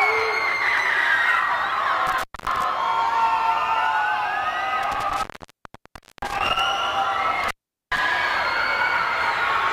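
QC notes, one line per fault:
2.07–2.64 s, 4.83–6.60 s and 7.44–7.99 s, intermittent contact: three dropouts where a loose cable or plug briefly loses its connection. The line stays open for about 0.23 s, then nearly a full second (0.99 s), then 0.41 s. The audio cuts out each time with crackle at the edges as the contact scrapes open and shut. While the connection is broken, faint hiss comes through.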